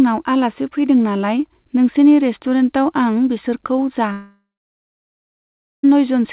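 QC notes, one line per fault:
4.12–5.85 s, long network dropout: right after "नोंसिनि रेस्तुरेन्टआव आं बिसोरखौ" the sound trails into a brief fading buzz, then about 1.4 s of near silence before audio resumes with about 1.7 s lost. This is likely a stall in packet arrival, with the receiver extending the last sound and then muting.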